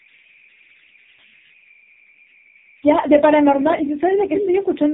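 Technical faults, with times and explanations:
Throughout, converter idle tones: a faint whistle sits around 2 kHz, about 27 dB below the speech, most audible in the pauses and as a grainy texture under the quieter syllables. A delta-sigma converter running without dither settles into repeating bit cycles when its input is very small. Those cycles behave like a steady oscillator at a pitch set by the input's DC offset, so the tone stays put instead of behaving like random hiss.
Throughout, AMR narrowband mobile codec: nothing passes above 3.8 kHz, so the speech has the boxed-in sound of a phone call, and the heavy damage gives the voice a buzzy, synthetic edge with warbling in the noisier stretches. AMR-NB rebuilds speech from a vocal-tract model excited by a handful of pulses per 5 ms subframe. The coarseness points to one of the lowest modes, around 5 kbps, where those pulses are too few to capture natural texture.
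4.33–4.49 s, echo leak: a delayed copy of the speech arrives 215 ms after the original, only a few dB quieter, so it is heard as a distinct doubling rather than room ambience. The likely cause is the far side playing the call over a loudspeaker while its echo canceller fails to subtract everything its microphone picked up. The residue is sent back down the line, which is why it surfaces as a brief scrap rather than a steady reverb.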